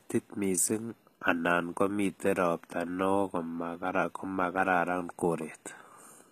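From start to finish, the speech carries plainly audible codec damage. The treble sounds bright but not genuine. S sounds come out gritty and lispy, with a metallic edge. This is likely HE-AAC compression. The codec keeps only the lower spectrum and rebuilds the top by copying lower bands upward. The copied harmonics do not line up with the real ones. The damage level fits a low bitrate, around 20 kbps.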